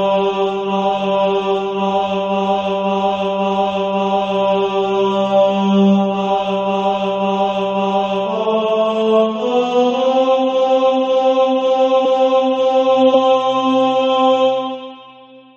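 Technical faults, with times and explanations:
12.04 s and 13.13 s, compressed frames skipped: each time the audio jumps forward with a short smeared blip rather than a hard click, losing roughly 150 ms and then roughly 70 ms. Whole compressed frames of about 23 ms were never decoded, and their overlapping neighbours blur the join.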